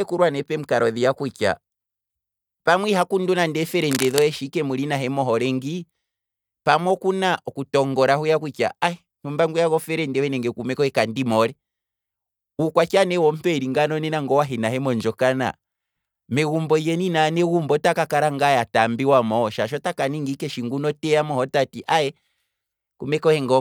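A speech recording, with a burst of scratchy, crackling rustle from 3.75 to 4.23 s, between "pamwe iha kundu nande" and "shi ike". For roughly half a second, dense, irregular noise sits over the sound, only about 10 dB below the speech level. This is cable scratch noise, likely from a worn cable, connector or control being moved, its contact resistance fluctuating rapidly and injecting the uneven noise into the signal.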